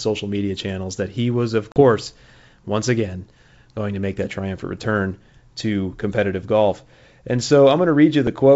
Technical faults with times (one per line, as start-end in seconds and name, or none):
1.72-1.80 packet loss on an ADPCM call